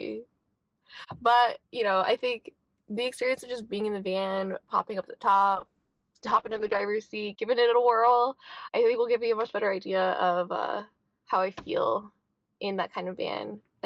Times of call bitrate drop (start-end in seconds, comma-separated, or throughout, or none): 5.58-13.69